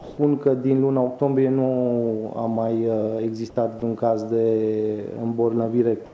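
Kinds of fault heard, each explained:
Comfort noise in place of the background: from 0.00 to 0.18 s and again from 6.06 to 6.14 s, the background, about 21 dB and about 24 dB below the loudest sound, becomes a steady, featureless hiss about 1 dB quieter. This is likely receiver-generated noise filling pauses while the sender stopped transmitting.
Sound dropped by the voice detector: from 3.80 to 3.82 s, 20 ms of sound vanishes beneath steady noise in a band that stops at 8 kHz. The likely cause is the sender's detector mistaking that moment for background and halting transmission, leaving the receiver to fill it with comfort noise.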